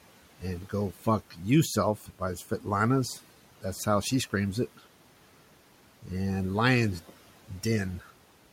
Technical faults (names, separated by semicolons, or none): speech cut by the noise suppressor